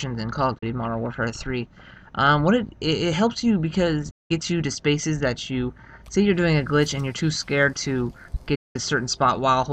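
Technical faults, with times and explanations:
0.58–0.63 s, 4.10–4.31 s and 8.55–8.76 s, digital broadcast dropout: the receiver stopped getting usable frames and muted until valid data returned, so the audio fades out over about 8 ms, falls silent, then resumes further along. The first hole loses about 32 ms, which fits a single bad frame. The later two each lose about 192 ms, consistent with six consecutive frames. The audio sent during those gaps is simply missing.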